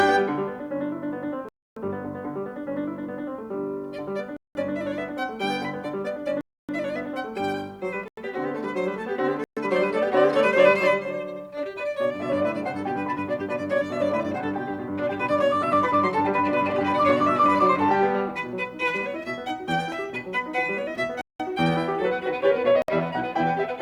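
The music drops out abruptly seven times, at 1.49 to 1.77 s (about 280 ms), 4.37 to 4.55 s (186 ms), 6.41 to 6.69 s (280 ms), 8.08 to 8.17 s (93 ms), 9.44 to 9.57 s (127 ms), 21.21 to 21.40 s (186 ms) and 22.82 to 22.88 s (63 ms). Each is a block of digital silence, where the output was zeroed, likely because buffers weren't filled in time. The 186 ms and 93 ms gaps fit 8192- and 4096-sample blocks.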